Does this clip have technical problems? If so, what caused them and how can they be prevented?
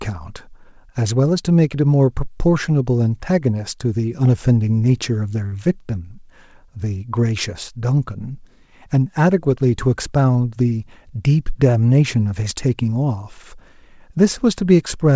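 Yes. At 5.46 to 5.54 s there is a short stall from a late packet. One packet missed its playout deadline and the jitter buffer ran dry, so the receiver held the last sound for about 60 ms until the packet turned up. It then resumed exactly where it left off. Nothing is lost, but the speech hangs on one sound for a moment, and everything after it plays 60 ms later. Giving the jitter buffer a little more headroom, or reducing network jitter through traffic prioritisation, would prevent this.

From 10.57 to 11.20 s there is a jitter buffer speed-up. The buffer held more audio than its target. To work that delay off, the receiver repeatedly cut out pitch-period-sized slices, removing roughly 70 ms in total. The speech runs at about 109% of normal speed without any change in pitch, so this stretch sounds hurried. Letting the buffer drain more gradually, or keeping packet arrival steadier so the excess never builds up, would prevent it.

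The G.722 call path, at 64 kbps, carries nothing above 8 kHz.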